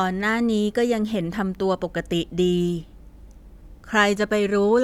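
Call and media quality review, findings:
No audible faults found; nothing to action.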